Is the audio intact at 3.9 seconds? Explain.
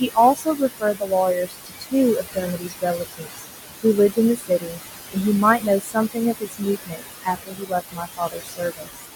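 No. Speech cut by the noise suppressor runs from 3.83 to 4.8 s. The suppressor mistakes parts of the speech for background noise and turns them down with it, by about 19 dB at the deepest point and for a total of roughly 0.4 s within that span. Those stretches sound swallowed and faint, as if parts of the speech are turned down along with the background.

The same moment also carries noise suppressor artifacts, which are present throughout the clip. Working frame by frame, the suppressor lowers the bands it judges to be steady noise, here by about 18 dB. The room noise, which sits about 7 dB below the speech, therefore sinks in the gaps and swells back underneath the speech.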